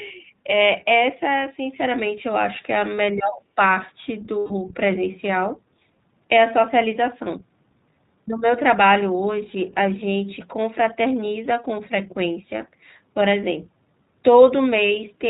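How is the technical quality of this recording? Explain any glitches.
The technical quality is limited, with constant codec coloration and three short glitches in the first five seconds. Throughout, the speech is narrowband and slightly rough and synthetic, with nothing above 4 kHz. This is the iLBC codec, and the sound fits its 15.2 kbps mode with 20 ms frames. Each frame is coded on its own, and the damage is plainly audible.

From 3.09 to 3.38 s the voice dips by roughly 20 dB for about 300 ms. This is likely speech suppressed in double talk, where the echo canceller turned the talker down along with the other end.

From 3.34 to 3.42 s a faint second voice, roughly 20 dB below the talker, slips in. This is likely the other side's voice leaking through as uncancelled loudspeaker echo.

From 4.39 to 4.52 s the voice freezes into a held, buzzy vowel for 120 ms, then recovers immediately. 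These are lost iLBC frames, which fits six 20 ms packets concealed by repeating the last pitch cycle.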